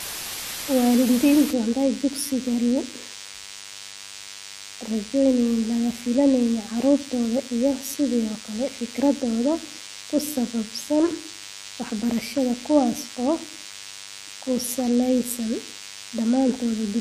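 For the first 1.51 s the speech sits under a loud, even hiss, roughly 10 dB below the speech itself. This is low bit depth with dither: the signal has been reduced to very few levels, which fits a 5-bit signal, and dither turned the rounding error into steady white noise. Unlike plain quantisation at that depth, there is no gritty distortion that follows the speech. The hiss stays constant, and it stops abruptly at 1.51 s.

Throughout the clip there is also a thin, steady buzz at 100 Hz with a dense stack of harmonics, around 20 dB below the speech. That is DECT cordless phone buzz. A nearby handset or base sends a radio burst every 10 ms, and the audio circuitry rectifies those bursts into sound. Mains hum would sit at 50 or 60 Hz and sound rounder. This buzz is harsher and never changes with the audio.

Also present for the whole length, nothing reaches above 14.1 kHz, and two different kinds of coding artefacts are heard at once. 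This is most likely transcoding between lossy codecs, pointing to an HE-AAC stage at a low rate followed by AAC-LC. The later encoder spent its bits on the earlier damage. A single codec pass would show only one type of artefact, not this layered mix.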